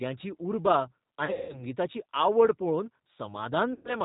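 The whole clip is coded with G.729, and the damage is plainly audible. The codec rebuilds the voice from a vocal tract filter, a pitch estimate and a few pulses per frame. Nothing above 4 kHz survives. The voice sounds thin, slightly rough and synthetic. That fits an 8 kbit/s G.729A stream.

From 1.25 to 1.65 s, there is VoIP packet loss concealed by the speech codec. About 220 ms of audio is missing, scattered over roughly 240 ms. The longest gap is 180 ms. The decoder fills each gap by repeating its last pitch and filter at falling gain. The voice smears into a buzzy tone or a coloured noise that fades. It stays weak for a moment after the gaps.

From 3.73 to 3.97 s, the same concealment occurs again. This time 120 ms is lost. The sound stretches into a buzzy tone or a coloured noise that fades out.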